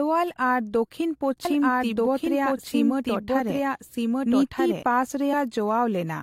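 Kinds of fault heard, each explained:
Doubled audio track, 1.45 to 4.83 s: a second full-band copy of the speech runs about one and a half seconds behind the original and at roughly the same loudness, so two versions overlap out of step. The copy is dry, with no decay or room colour, and it cuts in and out abruptly at those times. The likely cause is the signal being captured twice, once through a slower path, or an edit holding two misaligned copies.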